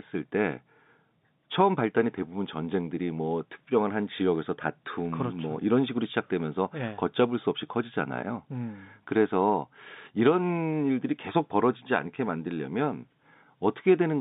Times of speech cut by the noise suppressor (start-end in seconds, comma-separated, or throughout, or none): none